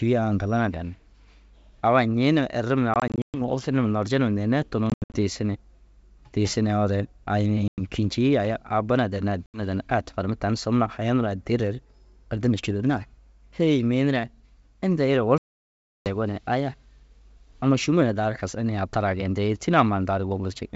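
Packet loss on an ADPCM call leaves hard-edged silent gaps at 2.94–3.41 s, 4.90–5.17 s after "larje neerei", 7.68–7.81 s, 9.46–9.61 s after "bu na danni", and 15.38–16.07 s. The first two gaps are broken into scattered dropouts, and the last is a single 0.68 s hole. Each loss knocks the decoder's adaptive predictor and step size out of step with the sender's. The speech comes back slightly distorted, and settles within some tens of milliseconds.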